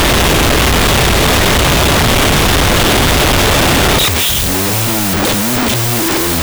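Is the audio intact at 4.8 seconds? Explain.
No. At 4.8 s, as throughout, wrong sample width: 16-bit speech read as unsigned 8-bit splits each sample into two, giving loud noise over half-speed, octave-low speech.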